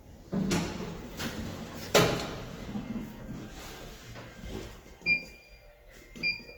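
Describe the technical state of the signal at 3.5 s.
At 3.5 s the sound carries the grainy, rough texture of Opus compression, present throughout the clip and likely from CELT music mode at a rate near 24 kbps. Starved bands are refilled with folded or noise content, so detail turns noisy rather than swirling as MP3 does, while the bandwidth stays full, reaching about 20.2 kHz.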